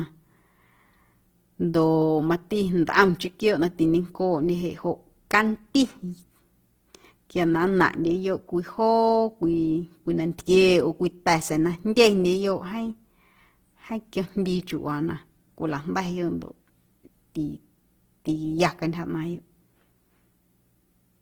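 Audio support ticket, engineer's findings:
Whole clip, 0 to end: speech with plainly audible grain and roughness, tonal parts turned noisy and hashy, little swirl or spectral gaps. Likely Opus compression in CELT music mode. The mechanism is band energies kept while fine detail is starved and refilled with folded or noise content. Bandwidth still full, up to about 20.2 kHz. Damage level fits a low bitrate around 16 kbps.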